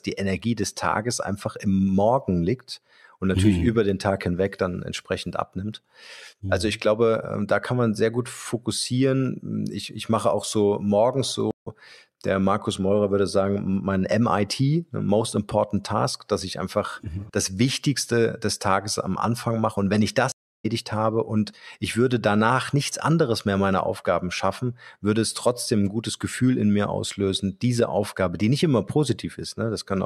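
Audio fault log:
11.51–11.67 s and 20.32–20.66 s, stream reconnect. The connection dropped and the player restarted its decoder mid-stream. After "mache auch so morgens" the sound stops for 138 ms, then resumes slightly further on, with a brief slice skipped. After "wenn ich" a 307 ms silence follows, and the speech returns about a fifth of a second later, at "habe und ich würde". The jumps forward show the stream kept running while the player was disconnected.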